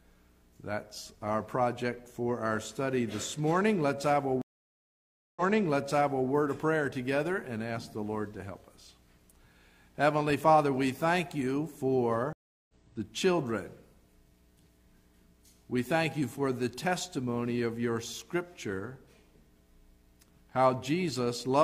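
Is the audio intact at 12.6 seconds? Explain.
No. At 12.6 seconds the playback is inside a stream reconnect running from 12.33 to 12.74 s. The connection dropped, so the player stopped, reconnected and started a fresh decoder partway into the stream. You hear about 0.36 s of silence, then the sound comes back roughly 0.4 s further along than where it stopped, so a short stretch is skipped. The first frame after the restart fades in.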